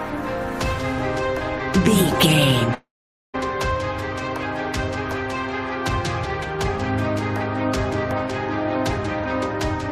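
From 2.74 s to 3.36 s, a long network dropout is likely: the stream stops delivering audio for about 0.6 s. The receiver stretches the last sound into a fading buzz, then roughly half a second of silence, before the audio resumes with that stretch missing.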